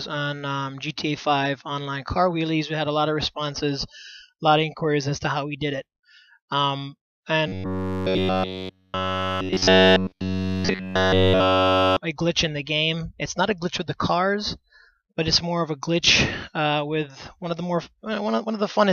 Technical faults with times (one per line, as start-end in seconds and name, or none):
7.48-11.98 robotic sound from repeated short buffers